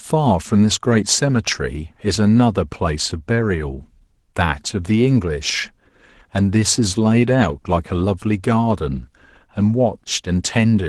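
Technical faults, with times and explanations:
Nothing stood out on listening to this speech recording.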